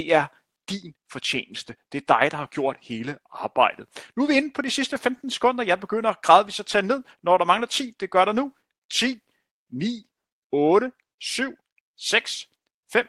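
Throughout the recording there is clock drift between sender and receiver: the sender's audio clock runs roughly 4 percent fast relative to the receiver's. Audio therefore arrives quicker than it is played out, and the jitter buffer keeps filling rather than holding a steady depth.

From 0.41 s to 12.85 s, repeated timing corrections follow from that drift. To stay in step, the receiver keeps cutting short pieces out of the speech, which matches an effective rate of 104 percent. The cuts all run the same way but come at uneven intervals. Each cut is small.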